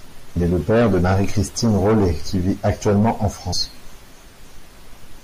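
From the start, the speech has a watery, swirly quality. Treble is cut off, and weak detail flickers in and out. Sibilants turn metallic. This is likely MP3 compression at a low bitrate, around 64 kbps, with too few bits to cover the spectrum.

At 0.35 s, compressed frames are skipped. The audio jumps ahead roughly 150 ms, which fits about seven 24 ms frames going missing. Overlapping frames blur the join into a short smeared blip, not a click. At 3.52 s the same thing happens again, a jump of about 100 ms.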